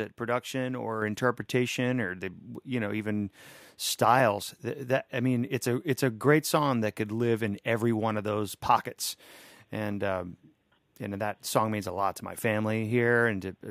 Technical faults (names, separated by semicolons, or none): microphone volume stepped up